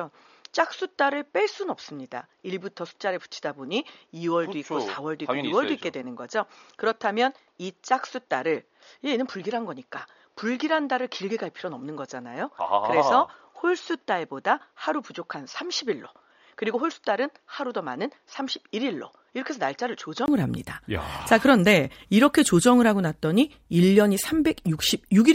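From the start until 20.28 s the speech sounds dull and boxy, with nothing above 6.9 kHz, a level a few decibels lower, and a faint background noise well below the voice. At 20.28 s a brief gap of about 20 ms breaks the sound, and the full brightness and level return. The likely cause is an input switched to a poorer device, a narrower-band microphone or headset profile, before the recording moved back to the better input.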